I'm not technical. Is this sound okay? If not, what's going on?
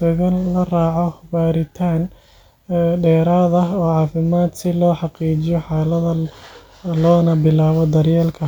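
Yes, nothing wrong can be heard in this recording.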